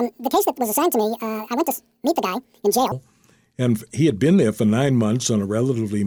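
From 0.00 to 2.92 s the audio was likely played against the wrong clock, leaving a section at the wrong speed that runs 1.93 times faster than recorded. Pitch and tempo climb together, so the speech sounds hurried and squeaky, roughly ten semitones high.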